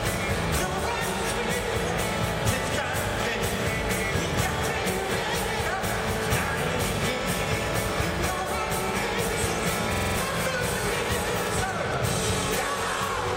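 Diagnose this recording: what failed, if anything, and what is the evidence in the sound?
A system hang loop at the driver or buffer stage, from 9.94 to 10.17 s, repeats one 46.44 ms slice five times, a 21.5 Hz machine-gun stutter that fits a 2048-sample ring buffer. The waveform shows identical repeating blocks, the spectrogram evenly spaced vertical stripes, and roughly a fifth of a second of audio is lost.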